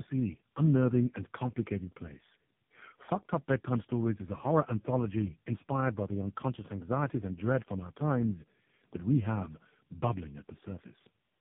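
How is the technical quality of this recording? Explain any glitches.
The quality is poor throughout: the speech sounds rough, muffled and warbly from start to finish, with nothing above 3.8 kHz. That is tandem speech coding: the sound points to about three speech codecs in a row, each re-encoding the previous one's degraded output, so their artefacts stack.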